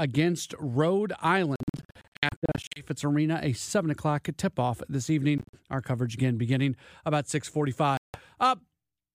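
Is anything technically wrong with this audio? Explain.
Yes. The speech breaks up three times in a pattern that fits a Bluetooth dropout. From 1.56 to 2.82 s, about 670 ms of sound is missing, scattered across 1.2 s in short holes no longer than 61 ms. From 5.38 to 5.57 s, about 107 ms is lost over 152 ms. From 7.97 to 8.20 s, about 168 ms drops out. The likely cause is audio packets arriving at the headphones too late and being discarded, so the output goes silent. What separates this from a stall or skip is that the timing never drifts: after each gap the speech picks up further along, as if it had carried on playing underneath.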